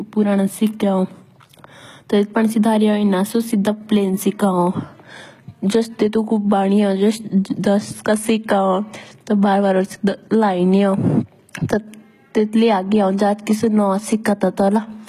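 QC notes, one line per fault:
Throughout, HE-AAC compression: likely a low-rate encode, around 20 kbps by ear, that keeps only the lower spectrum and copies it upward to fake the treble. Those rebuilt highs, ending at 14.9 kHz, don't match the real harmonics, so s sounds turn audibly gritty.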